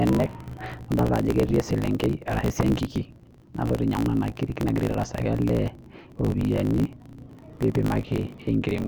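From start to finish, the speech carries a steady buzz at about 54.4 Hz and moves along 1.16 times faster than it should, while its timbre stays the same. This is a block size mismatch (truncated). One stage writes longer blocks than the next stage takes in, which fits blocks of 1024 samples, so the tail of every block is discarded. Each cut repeats at the block rate to form the buzz, and the missing pieces make the speech run fast.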